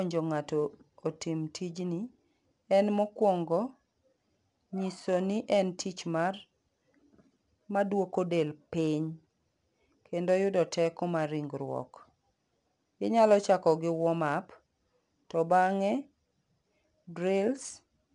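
Throughout the speech, 4-bit ADPCM compression codes each sample as a coarse step from a prediction, which fits a bitrate near 89 kbps. Its error noise rises and falls with the level, giving a plainly audible gritty hiss and roughened attacks. Nothing is present above 10.7 kHz.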